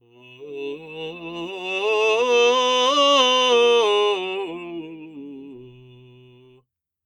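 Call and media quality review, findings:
Noise suppressor applied to music, whole clip. Level pumps and flutters, with gain swinging around 20 dB. Probable component: the speech-tuned noise suppressor left on. It reads sustained tones, ambience and reverb as noise and ducks them, so attacks punch through while held notes and tails sag. Worth flagging music mode or a bypass for this source.

Sound cut by the noise suppressor, 0.01–0.43 s and 4.86–6.65 s. Sustained material sinks, about 16 dB down at the deepest, roughly 0.4 s and 2 s affected. Same suppressor misclassifying steady or decaying content as noise. Decays get chopped short, and transients mostly survive.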